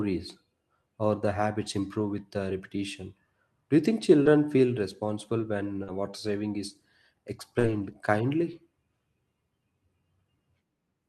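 A speech recording with two separate packet-loss faults. At 1.99 to 2.01 s there is a lost packet rebuilt from error correction. One 20 ms frame went missing. The decoder played the low-bitrate backup copy carried in the next packet. So nothing drops out, but that instant sounds briefly rougher and noisier. Between 4.23 and 7.85 s come scattered short gaps. About three small holes appear, together roughly a tenth of a second. The longest is around 40 ms. The receiver covered each by stretching the preceding sound, which leaves brief ticks, smears or hiccups in otherwise clear speech.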